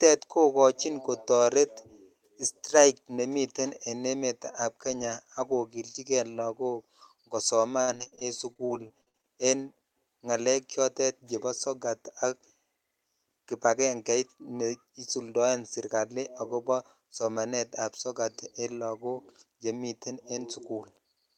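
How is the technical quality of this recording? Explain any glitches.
The recording has one clear fault: a burst of repeated packet loss (robotic sound) between 7.81 and 9.25 s. Over that 1.4-second stretch, the stream drops out more than a dozen times, with the longest gap lasting 63 ms. Each hole is bridged by extending the preceding sound, which accounts for 424 ms of filler, while another 340 ms is simply missing. About 29% of the stretch is concealed, so the speech turns choppy there, with fragments cut out.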